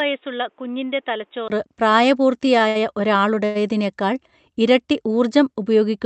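From the start of this speech until 1.5 s, the input has likely switched to a poorer device. The sound is dull and boxy, with nothing above 3.8 kHz, sits roughly 10 dB lower, and carries a faint background noise of its own, far below the speech. A brief silence of about 20 ms marks the switch. After it, the band opens back out to the 8 kHz allowed by the call path, and the level returns. A codec limit would stay constant throughout, whereas this change in tone, level and noise happens at one moment, which points to a different input device.

From 2.68 to 2.77 s comes a short stall from a late packet. A packet arrived late, and the receiver held the last sound for 69 ms until it came, then carried on from the same point. One sound is drawn out with a slight buzz or dip, and nothing is skipped. This differs from a dropout, where sound goes missing, and from the longer event that follows, because it is brief and the held sound does not fade.

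At 3.45 to 3.57 s there is a call audio freeze, likely from packets held up in transit. For 100 ms the last sound is continued as a buzz or hiss that fades but never reaches full silence. The speech then resumes where it stopped, so a gap has been inserted and nothing is lost. It is longer than the stall, and the filler audibly decays, which sets it apart from a simple held sound.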